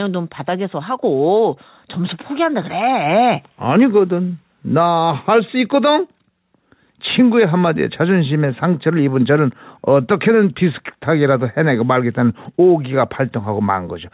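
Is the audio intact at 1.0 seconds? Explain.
No. At 1.02 s the microphone volume is stepped up: the call software judged the input too quiet and raised the device's input volume in a single jump of about 3 dB. From that instant the speech and the background noise floor both sit louder together and stay there. Unlike a compressor or gain ramp, which swells the level gradually and mainly follows the voice, this is an abrupt step that lifts everything equally.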